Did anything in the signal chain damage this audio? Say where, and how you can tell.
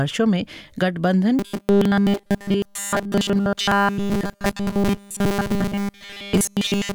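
Yes. From 1.39 s to the end, the sound collapses into a rigid, metallic buzz pitched at 200 Hz. That's the classic robotic sound from repeated short buffers, which points to the driver or buffer stage. The likely cause is new audio arriving too slowly, so the playback side keeps looping the last chunk while the real material is skipped. Everything after 1.39 s is repeats, and a 200 Hz buzz fits a loop about 5 ms long.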